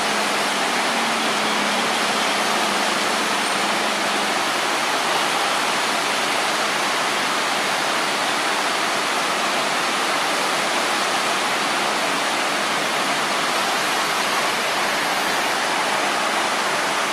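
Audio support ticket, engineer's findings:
Adaptive stream at a lower bitrate, 13.49–15.49 s. Sudden 2 s drop in clarity with more codec smearing and no gap, consistent with the player switching down to a cheaper rendition, roughly 64 to 24 kbit/s Opus, then recovering.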